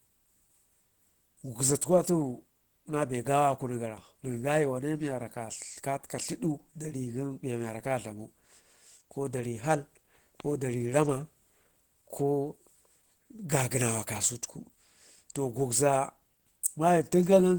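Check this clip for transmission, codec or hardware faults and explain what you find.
One fault is audible, and it lasts the whole clip. It is Opus compression. The speech sounds hoarse and somewhat muffled, with plainly audible codec damage. That is likely Opus switching to its hybrid speech mode, which fits a bitrate around 16 kbps. Content still extends to about 20.1 kHz.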